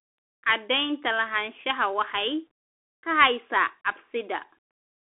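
Throughout, the speech passes through a Bluetooth CVSD headset codec. Only 150 Hz to 3.4 kHz survives, with nothing above 3.8 kHz. Its one-bit steps lag loud high sounds, leaving scratchy s sounds and a granular hiss that a clean telephone band-limit lacks.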